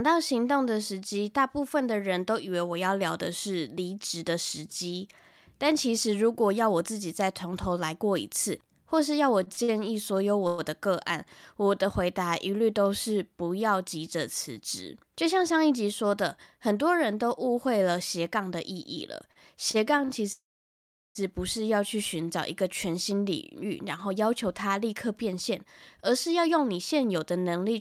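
Speech with repeated stalls (stutter) at 9.43–10.61 s (four gaps totalling 237 ms, longest 109 ms) and 19.32–20.11 s (four gaps totalling 104 ms, longest 35 ms), where late packets emptied the jitter buffer and the last sound was stretched, showing as short frozen, smeared stripes on a spectrogram. A jitter buffer speed-up at 13.95–15.80 s (104%) and 22.39–27.75 s (107%, about 0.4 s trimmed) cuts out pitch periods, so syllables sit closer together while harmonic spacing stays the same. A call audio freeze at 20.32–21.18 s, likely from a delayed packet burst, holds the sound briefly and then leaves a 720 ms silent blank in the waveform before the speech resumes.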